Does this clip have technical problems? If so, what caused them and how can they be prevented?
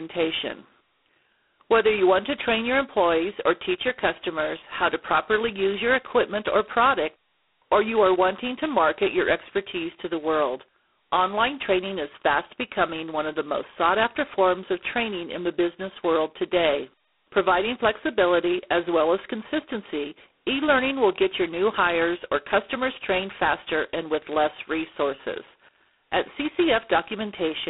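Yes. Throughout the recording, the speech carries a harsh, rasping hiss that rises and falls with its level, sitting inside a thin telephone band of roughly 250 Hz to 3.5 kHz with nothing above 3.9 kHz. This is heavy G.726 ADPCM damage. The codec sends each sample as only a few bits of difference from an adaptive prediction, and with so few bits the quantisation error becomes loud. That points to the 16 kbit/s mode. To prevent it, run G.726 at 32 kbit/s or use a wideband codec on the link.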